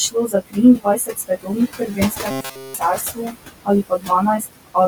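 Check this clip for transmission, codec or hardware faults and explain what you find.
Four faults can be heard in this speech recording: comb filtering from a channel delay, noise suppressor artifacts, speech cut by the noise suppressor, and a robotic buzz.

The channel delay causes comb filtering throughout. One channel trails the other by around 20 ms, and when the two are summed to mono, the shared content cancels at evenly spaced frequencies starting near 30 Hz. The notches stay fixed, giving a rough, slightly doubled sound. That fixed pattern is what separates it from the suppressor's processing, which shifts from moment to moment.

The noise suppressor artifacts also run throughout. The suppressor pulls down every band it judges to be steady noise by about 19 dB, frame by frame. The room noise, which sits about 10 dB under the speech, is deep in the gaps but rises back under the voice. 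Unlike the comb filtering, this effect tracks the level of the speech rather than holding still.

Speech is cut by the noise suppressor at 0.1 to 0.57 s, 0.77 to 1.51 s, 1.68 to 3.36 s, 3.89 to 4.1 s and 4.39 to 4.76 s. In each stretch the suppressor treated part of the speech as noise and lowered it by about 19 to 22 dB. Soft consonants and word endings sound swallowed. These are brief level losses inside each span, not a change in timbre, and that is how they differ from the other faults.

The robotic sound from repeated short buffers runs from 2.31 to 2.74 s, and it falls within the longest suppressor cut. Audio is almost entirely replaced by a repeated fragment, most likely because new buffers arrived too seldom. The loop imposes a rigid metallic buzz at 133 Hz, which fits a buffer of about 7.5 ms. The buzz keeps a fixed pitch while roughly following the speech, which sets it apart from the suppressor's frame-by-frame level changes.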